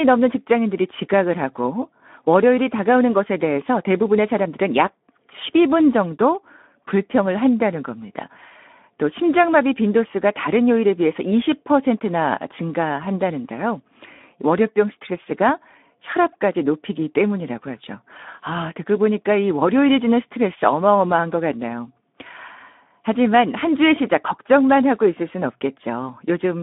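Speech passed through the Speex codec at about 11 kbps throughout: hoarse, noisy CELP texture, telephone band of 200 Hz to 3.6 kHz, and a spectrogram showing nothing above 3.8 kHz.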